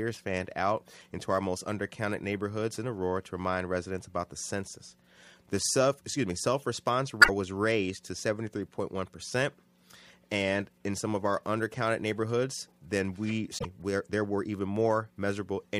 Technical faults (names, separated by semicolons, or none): damaged data in a compressed stream